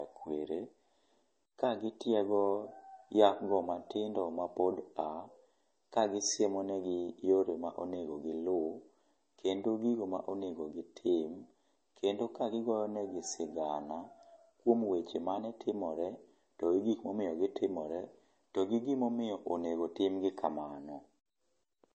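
From start to finish the speech has nothing above about 8.4 kHz, and the swirly, smeared MP3 artefacts of a very low bitrate (roughly 32 kbit/s) remain audible. This is likely low-bitrate audio saved at a high bitrate: the first encode discarded the detail, and the later, larger encode could only preserve the damage. Unlike a simple low-pass filter, the codec smearing is present, and unlike a true high-bitrate file, the top band is missing.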